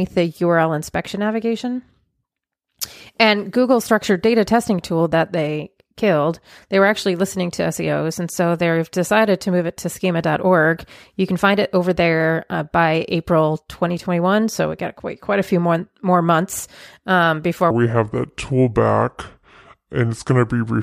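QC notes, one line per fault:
17.71–20.82 s: section at the wrong speed after "more months um before"; 0.697x, roughly seven semitones deeper and slower, likely a clock mismatch; spectrogram harmonics drop, waveform stretches.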